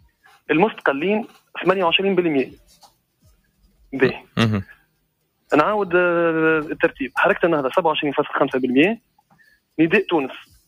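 Sound cut by the noise suppressor occurs at 0.01–0.49 s, 1.29–1.55 s, 2.57–3.02 s, 3.22–3.93 s, 4.71–5.07 s, 9.0–9.55 s and from 10.45 s to the end. Each time the suppressor mistook wanted sound for background noise and pulled it down, by about 13 to 18 dB at the deepest. Steady stretches sink in level and tails are clipped short, while sharp onsets survive.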